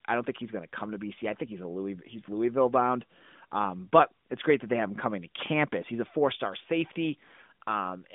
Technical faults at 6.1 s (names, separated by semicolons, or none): none